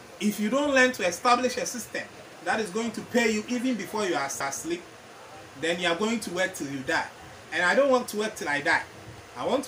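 At 4.40 s there is a CD skip. The laser lost its place on the disc's spiral and landed on another turn. The player muted for only a few milliseconds, which is heard as a brief tick. The sound then carries on from a different point in the recording. The continuity breaks at once, with no fade or overlap. What came just before simply stops, and the playback resumes out of sequence.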